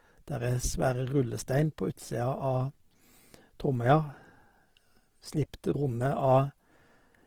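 A speech recording with Opus compression damage running the whole way through, likely from a low-rate Opus encode in its music (CELT) mode, with a graininess that points to something around 16 kbps. Each band's energy is kept, but starved bands are filled with folded or noise content, so the voice sounds rough and grainy rather than swirly. A spectrogram shows few holes but a smeared, noisy texture extending to about 20.3 kHz, with nothing above that.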